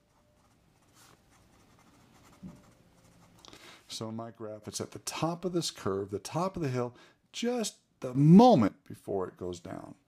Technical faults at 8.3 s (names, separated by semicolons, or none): sudden gain jump